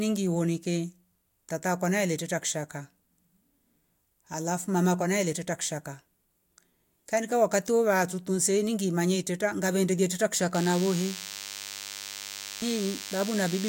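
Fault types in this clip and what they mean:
DECT cordless phone buzz: a DECT handset or base station close by is firing a short radio burst every 10 ms, and something in the audio chain is rectifying it, so you get a thin, steady 100 Hz buzz full of harmonics. It comes in right after "manye iteta gavende teta", at about 10.54 s, and runs to the end of the clip, sitting roughly 10 dB under the speech.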